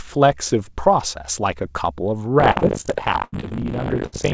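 From 2.38 s to the end, buffer tearing sets in: the writer and reader of the playback ring buffer have slipped, so about a third of each period repeats audio from roughly 70 ms earlier. The result is a steady 50 Hz rattle, which fits a 20 ms buffer period. It is present only while there is sound, unlike a hum.

Short concealed packet loss falls at 2.52, 2.59, 2.81, 3.40 and 3.49 s. Each gap of 20 to 40 ms was patched by extending the preceding sound and blending back. These are heard as quick smears or wobbles, too brief to fade.

A burst of packet loss runs from 3.24 to 3.34 s and again from 4.06 to 4.14 s, with about 80 ms and 60 ms missing. Concealment holds the last sound as a dimming buzz or hiss, then jumps ahead. These are longer and more audibly decaying than the short patches, and all of this sits within the G.722 call band, which has nothing above 8 kHz.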